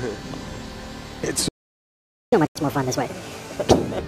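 At 1.48 s the sound stops dead and stays silent until 2.33 s, a gap of about 0.84 s, most likely a playback stall where the player ran out of data. From 2.33 s to 3.99 s everything runs fast and high, 1.5 times speed and roughly seven semitones up: catch-up at higher speed, as the player races through its backlog. Inside that stretch, from 2.47 s to 2.56 s, an 88 ms dropout to silence cuts in, likely a Bluetooth stall where delayed packets left the headphone buffer empty.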